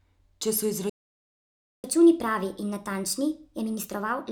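At 0.89 s the speech cuts out abruptly mid-flow and the output stays silent for about 0.94 s, until 1.84 s. This is a playback stall. The gap sounds like a dead pause rather than a natural break, and the speech picks up again afterwards. The likely cause is the player running out of buffered data, or its playback thread being blocked, so nothing reached the output until it recovered.

From 1.84 s to the end, the speech runs noticeably fast and sounds higher and chipmunk-like, raised by around four semitones. This is catch-up at higher speed: after the stall, the player resamples its backlog to play at 1.25 times normal speed, winning back some of the lost time. Because resampling changes speed and pitch together, the voice rises in pitch for as long as the catch-up lasts.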